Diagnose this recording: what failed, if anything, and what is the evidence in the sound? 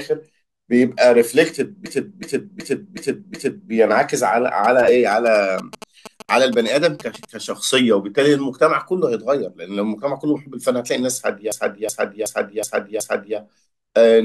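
A system hang loop appears twice, from 1.86 to 3.72 s and again from 11.52 to 13.38 s. Each time one 0.37 s stretch of speech repeats exactly five times at about 2.7 per second, a skipping-record effect that fits a 16384-sample ring buffer being replayed while the driver or host stalled. Little or nothing of the speech is lost afterwards. Exact repetition of identical material sets it apart from dropouts or jitter.

GSM signalling bursts run from 4.64 to 7.25 s. They are a galloping dit-dit-dit of short buzzes at 217 Hz, sitting about 15 dB below the speech. This is a nearby 2G phone's radio signalling being rectified in the analogue wiring or input stage. The buzz comes in gated clusters at 217 Hz, not as a steady tone at mains frequency or its harmonics, which separates it from ground-loop hum.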